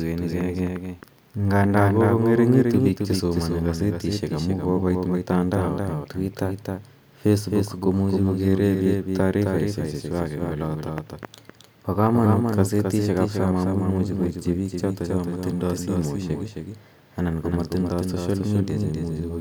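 From start to finish, every syllable of the speech is shadowed by a second, slightly quieter copy of itself arriving about a third of a second later, roughly 5 dB down. The echo is dry and full-range, with no room tail or fading, so it reads as a doubled audio track rather than reverberation. The likely cause is the same signal being mixed in twice, once through a slower capture path or a misaligned duplicate that trails the original.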